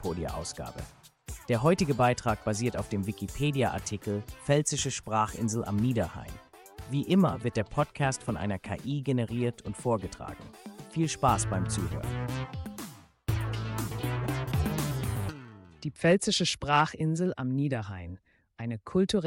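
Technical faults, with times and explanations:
No technical faults can be heard in this clip.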